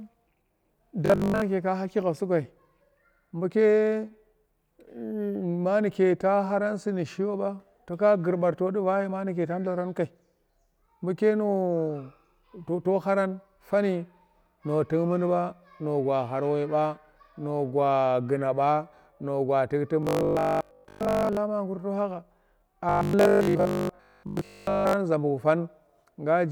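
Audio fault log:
1.06–1.42 s, 20.03–21.37 s and 22.89–24.99 s: robotic sound from repeated short buffers. In each stretch the speech turns into a stiff, metallic buzz at 50 Hz that still loosely follows the syllables. The first stretch ends just before "ka haki gha". A 50 Hz buzz fits a 20 ms piece of audio being played again and again, likely because new audio arrived too slowly. Most of the real signal in these spans is skipped, not heard.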